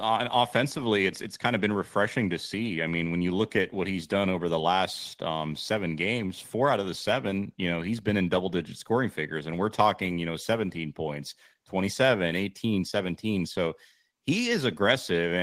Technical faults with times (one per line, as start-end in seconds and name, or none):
none